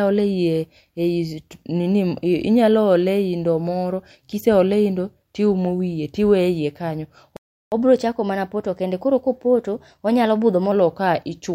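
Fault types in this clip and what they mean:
Playback stall: the speech cuts to silence for about 354 ms at 7.37 s, likely because the player ran short of data or was blocked.
Catch-up at higher speed: from 7.72 s to 10.72 s the speech runs 1.1 times fast, pitch up about one and a half semitones, recovering lost time.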